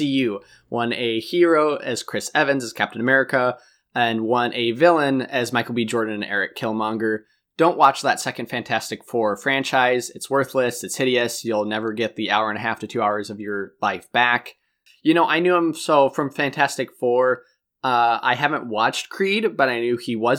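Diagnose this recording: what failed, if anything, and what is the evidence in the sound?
Nothing failed: across the whole speech recording no stage of the chain leaves an audible defect to point to.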